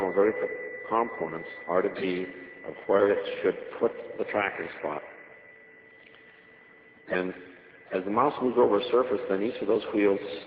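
Four lost packets rebuilt from error correction at 1.93–1.95, 2.65–2.67, 2.81–2.83 and 2.97–2.99 s, each 20 ms, play as brief rough, noisy grains from the decoder's low-bitrate backup copies. A waveform shows no gaps, and a spectrogram, already capped near 6 kHz by the Opus call path, shows only thin smeared slivers.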